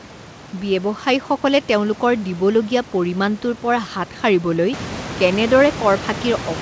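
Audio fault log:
No faults are present in this speech clip. The room's background noise rises by about 11 dB at around four and a half seconds and stays about 13 dB below the speech, and the call path's G.722 coding at a 64 kbps setting leaves nothing above 8 kHz.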